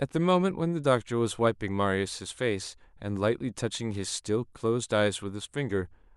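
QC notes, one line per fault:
No audible faults found in this speech recording.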